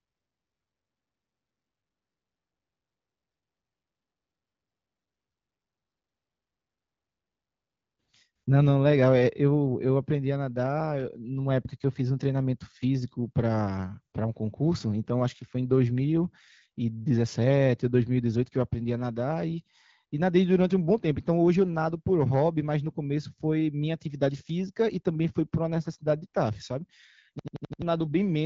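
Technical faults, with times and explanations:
27.39–27.82 s, system hang loop: a rapid machine-gun stutter near the end, one 85 ms fragment repeating exactly five times at about 11.7 Hz. The playback side froze while the sound hardware kept cycling through the same ring buffer, which fits a 4096-sample buffer, so around 0.4 s of the real speech never plays. The repeats carry the AMR wideband (HD Voice) codec's bandwidth, with nothing above 7.5 kHz.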